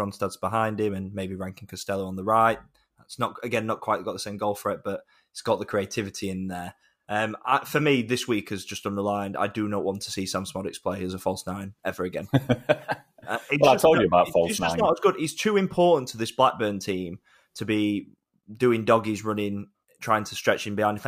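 No technical faults detected.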